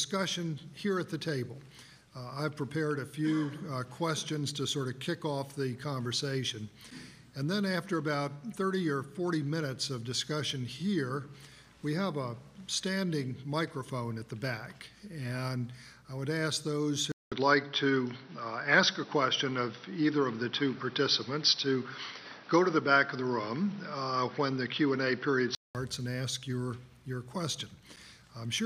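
At 17.12 s the sound drops out for 200 ms, then returns band-limited with nothing above 5.9 kHz, a level shift of roughly 5 dB and a new noise floor about 30 dB down, lasting until 25.75 s. The likely cause is an input switched to a poorer device.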